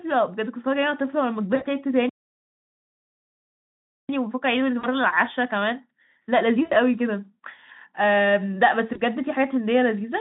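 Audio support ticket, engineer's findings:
Packet loss concealment by the speech codec at 1.55–1.66 s, 4.79–4.86 s, 6.65–6.73 s and 8.93–9.01 s. Brief buzzy, smeared stretches, roughly 60, 40, 60 and 20 ms of missing audio, consistent with dropped 20 ms frames. Decoder repeats last pitch and filter with decaying gain, leaving speech thin just after.

Playback stall, 2.09–4.09 s. Speech cuts out mid-flow for 2 s of silence, then resumes. Likely cause: player buffer underrun or blocked audio thread, output starved until data returned.

Time-compressed catch-up, 4.09–7.09 s. Speech runs about 1.1x fast at unchanged pitch. Player trimming its post-stall backlog by dropping and cross-fading short segments. Overlaps the 4.79 s concealment event. Speex line, band roughly 150 Hz to 3.7 kHz, carries it.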